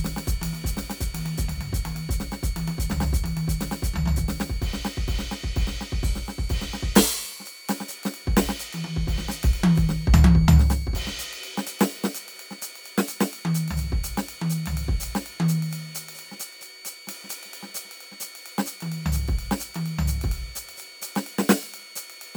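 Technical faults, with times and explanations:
Throughout: switching supply whistle. A thin high tone sits under the music, wandering between about 2.21 and 2.27 kHz and running roughly 20 dB below the programme level. It comes from a switch-mode power supply whose switching has dropped into the audible range, either by cycling in bursts at a low repetition rate or by beating against a second supply, and the small pitch drift follows shifts in that switching rate.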